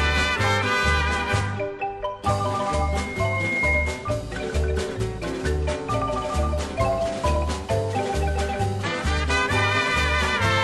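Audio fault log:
2.66–4.23 s, loudspeaker feedback squeal: a single 2.1 kHz tone rises out of the sound over roughly a second and settles a few dB above the programme. The microphone is re-capturing its own loudspeaker, and the loop gain at that frequency exceeds unity until the loop is broken.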